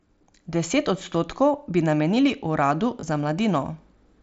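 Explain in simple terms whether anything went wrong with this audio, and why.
Just after "odstotkov bi namenili uradu", from 3.00 to 3.03 s, the speech briefly turns buzzy, then warbles slightly as it resumes. This is concealed Bluetooth headset packet loss: a few voice packets from headset to phone went missing, and the phone filled the gap by repeating a scrap of the preceding sound.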